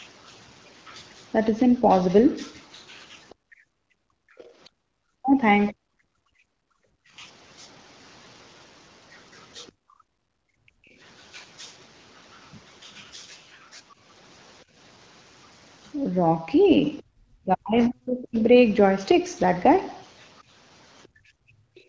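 From 3.29 to 4.69 s a faint second voice sits under the speech, about 30 dB below it. This is the other side's voice leaking through, likely loudspeaker echo that the echo canceller failed to fully remove. Unlike crosstalk, it appears only where the canceller is working, and it returns briefly at 9.67 to 9.72 s and again from 21.03 to 21.81 s, each time around 35 dB down.

Overlapping the first leak, from 3.35 to 7.14 s, the room tone dips and drops out for about one and a half seconds in total, by as much as about 38 dB. This is background gated by the echo canceller, which pulled the microphone down hard while the loudspeaker played. It recurs from 9.72 to 10.99 s (about 36 dB) and from 21.08 s to the end (about 29 dB). What distinguishes it from a noise gate is that the gaps follow the far-end activity rather than pauses in the talker.

Between 5.19 and 6.57 s, and again from 17.13 to 18.36 s, the talker's own speech is turned down, dropping by roughly 40 dB. 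This covers a few tenths of a second in the first window and about a second in the second. This is likely speech suppressed in double talk. Unlike packet loss, the losses cluster where both sides talk at once and come with no glitching or concealment artefacts.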